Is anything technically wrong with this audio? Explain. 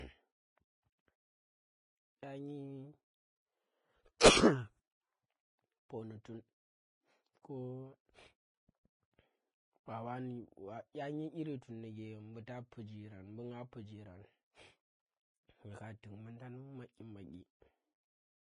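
Yes. Throughout, the speech sounds hissy and grainy, with nothing above 10.5 kHz; this is likely Vorbis compression at a low rate, around 18 kbps, coarsely quantising treble into noise.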